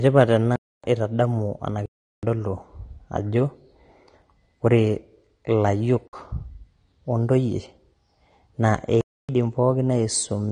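A speech recording that has lost everything above 9.7 kHz and carries the artefacts of a low-bitrate lossy encoding. The clip is likely low-bitrate audio saved at a high bitrate: the content points to a 32 kbit/s AAC source re-encoded as MP3 at roughly 237 kbit/s. The larger file cannot restore what the first encoder threw away. On a spectrogram this appears as a flat ceiling at 9.7 kHz across the whole clip, with blotchy, patchy energy below it. Four blocks of digital silence also cut through the sound, at 0.56–0.84 s (279 ms), 1.86–2.23 s (372 ms, which fits a 16384-sample buffer at 44.1 kHz), 6.08–6.13 s (55 ms) and 9.01–9.29 s (279 ms). Each one drops out abruptly and returns without a fade. The longer gaps are heard as holes and the 55 ms one as a brief dropout. The waveform shows them as flat lines, and the spectrogram as dark vertical bands. This pattern suggests the output buffer was not filled in time.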